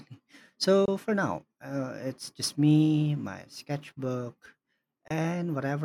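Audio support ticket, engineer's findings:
Corrupt frame decoded, 0.85–0.88 s before "for now uh it's" (louder) and 5.08–5.11 s after "just me my sketchbook" (quieter). Each is a single damaged frame decoded anyway, with spurious energy at the wrong frequencies.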